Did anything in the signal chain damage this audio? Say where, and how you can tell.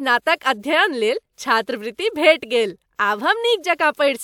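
No, nothing along the signal chain has left an audible mark on this speech recording, and the signal holds steady with no breaks, jumps or added disturbances anywhere in it.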